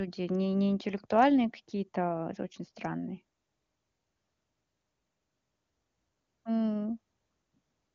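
Nothing goes wrong anywhere in this speech, which comes across an AMR wideband (HD Voice) link whose clarity points to the codec's top rate of about 23.85 kbit/s, with the highs simply running out around 7.2 kHz where that codec's band ends.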